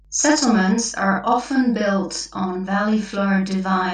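Right from the start and running the whole way through, there's mains hum: a steady low 50 Hz drone sitting roughly 30 dB under the speech, with a few low harmonics riding on it. That's the power line leaking in, most plausibly through a ground loop or a transformer close to the gear.

Also present throughout is a channel delay (doubling). One channel arrives about 46 ms behind the other, which fits a 2048-sample buffer, and once the two are folded to mono you hear every syllable twice at equal level, like a tight slap echo trailing the speech.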